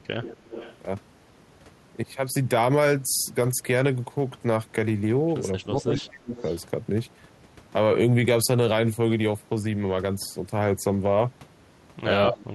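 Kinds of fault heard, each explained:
Echo leak: A faint copy of the speech returns 245 ms late, roughly 15 to 20 dB below it, at 0.22 to 0.76 s, 5.68 to 5.86 s and 6.36 to 6.56 s. This is likely loudspeaker pickup at the far end that its echo canceller left unremoved.
Speech suppressed in double talk: The speech drops sharply, by about 30 dB around 5.59 to 6.4 s and by about 35 dB from 12.29 s to the end, while the other side is active. This is likely an echo canceller attenuating everything during simultaneous talk.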